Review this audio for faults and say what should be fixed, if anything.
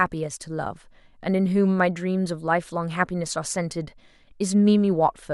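Nothing needs fixing here, as no faults can be heard anywhere in the speech. There is nothing to prevent or correct.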